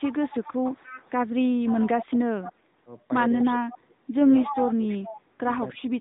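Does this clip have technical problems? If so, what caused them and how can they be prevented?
Yes. The whole clip passes through the AMR narrowband mobile codec at 10.2 kbps. Nothing above 3.8 kHz survives, and the speech sounds plainly buzzy and synthetic. A wideband codec or a higher AMR mode would prevent this.

An echo leak appears at 0.0–1.11 s, 1.65–2.53 s, 3.42–3.77 s, 4.51–5.16 s and 5.74–5.78 s. It is a copy of the speech delayed by 282 ms, mostly faint but nearly as loud as the talker at 4.51–5.16 s. The likely cause is loudspeaker playback that the echo canceller did not fully remove. Headsets or better-tuned echo cancellation would prevent this.

Speech suppressed in double talk occurs at 3.49–4.11 s, 4.44–5.33 s and 5.72–5.99 s, where the talker dips by roughly 20–25 dB. This is likely the echo canceller turning down both voices during overlapping talk. Full-duplex-capable echo cancellation with gentler suppression would prevent this.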